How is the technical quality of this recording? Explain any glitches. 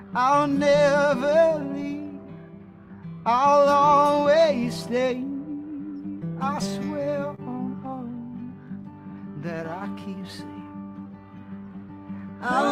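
Timing is the weak spot here: there's clock drift between sender and receiver running through the whole thing, plus one short stall.

The drift is the root of it. The sending end's clock runs slow, roughly 2% behind the receiver, so the receiver's jitter buffer keeps draining faster than it's refilled. Nothing breaks outright, but the receiver has to keep compensating for the whole length, and that's what you end up hearing as a slightly wobbly pace rather than any single obvious glitch.

The compensation shows up as repeated timing corrections from about 0.50 s to 12.39 s. Because the sender is slow, every edit goes the same way: the receiver repeats tiny slices of audio to pad things out, playing at effectively 98% speed. Altogether it adds roughly 300 ms. The edits are small and unevenly spaced, so you get faint hiccups and a tempo that feels a touch uneven rather than clean cuts.

At 7.35 s to 7.40 s there's a short stall from a late packet. 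A packet didn't turn up on time, the buffer ran dry, and the receiver held the last bit of sound for about 30 ms until it arrived, then carried on from the same point. Nothing's actually lost, but that moment drags slightly, with a slight buzz or dip.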